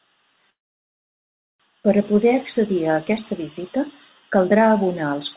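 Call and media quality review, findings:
Sound cuts out 0.50–1.62 s: short fading fill, then silence; resumes where it stopped, nothing lost. Call audio freeze, likely jitter buffer starved by delayed packets, adding a 1.1 s gap. Band-limited, nothing above 4 kHz, fits the G.711 call path.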